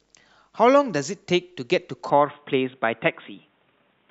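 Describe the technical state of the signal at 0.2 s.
At 0.2 s the speech signal is intact, with no audible fault.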